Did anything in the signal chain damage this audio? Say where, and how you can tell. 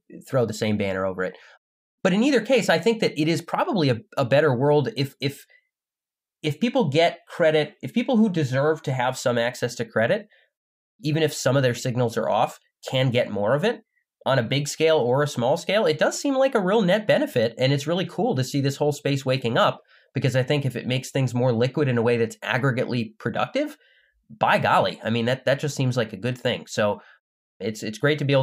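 No, nothing in this speech recording stood out as damage from any stage of the signal chain on listening.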